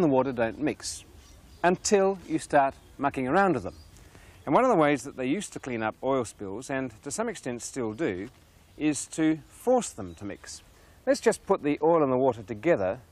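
No technical faults are audible anywhere in the recording.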